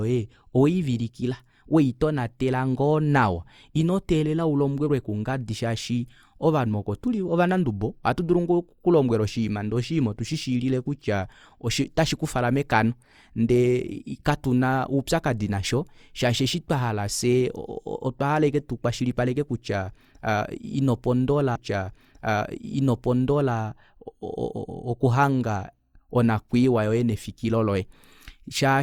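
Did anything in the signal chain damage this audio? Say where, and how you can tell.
Yes: at 21.55 s the speech jumps back with a small blip and replays two seconds through 23.55 s, a stream segment repeated because the player fetched or queued one segment twice.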